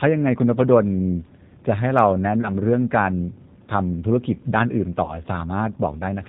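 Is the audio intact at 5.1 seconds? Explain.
No. From 5.04 to 5.19 s the speech smears into a buzzy, fading tone, then stays weak and distorted briefly. This is VoIP packet loss concealed by the speech codec. About 40 ms of audio went missing, which fits two lost packets. The decoder extended its last pitch and filter with falling gain, and recovery lagged because each frame builds on the previous one. Underneath, the speech sounds plainly rough and synthetic, with nothing above 4 kHz. That comes from the 8 kbit/s G.729 codec, which rebuilds speech from a vocal tract filter, a pitch predictor and sparse pulses.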